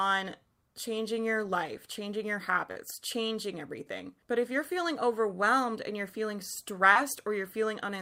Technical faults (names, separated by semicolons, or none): short concealed packet loss